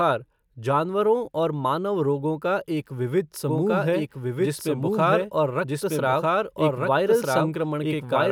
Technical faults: doubled audio track

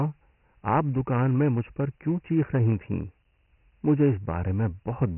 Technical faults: Dialogic VOX ADPCM

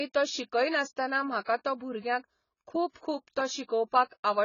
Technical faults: AAC compression

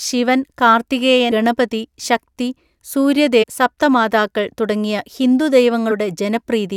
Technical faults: damaged data in a compressed stream

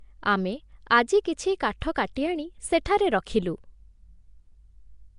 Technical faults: Nellymoser compression; pre-echo

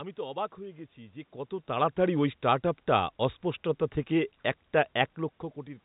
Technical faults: none

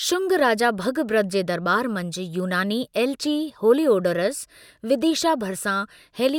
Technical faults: none

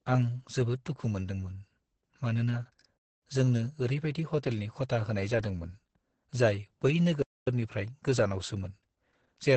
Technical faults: Opus voice compression; gap between chunks

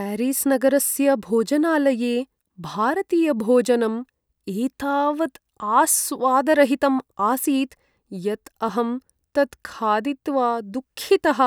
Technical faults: none

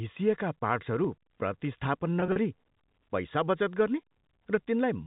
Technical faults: packet loss with pitch repetition

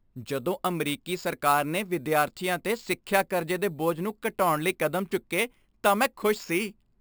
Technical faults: imaging from sample-and-hold upsampling

